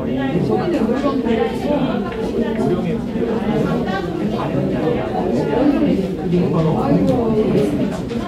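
No technical faults are audible anywhere in the audio.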